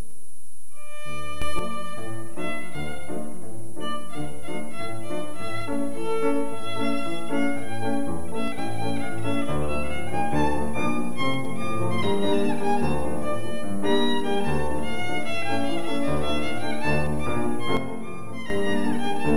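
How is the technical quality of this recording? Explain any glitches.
Two abrupt level steps mar the recording. Sudden gain jumps occur from 1.42 to 1.59 s, rising about 6 dB, and from 17.77 to 18.5 s, dropping about 8 dB. The level and background noise shift together instantly, likely from a gain change applied without a ramp.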